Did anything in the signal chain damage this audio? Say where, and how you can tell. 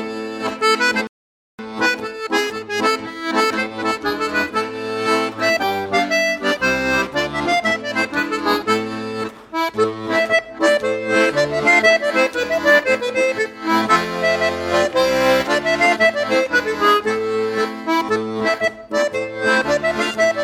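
Yes: a rebuffering stall at playback, silence from 1.07 to 1.59 s, then resuming exactly where it stopped. The player's buffer emptied, adding 0.52 s without losing any audio.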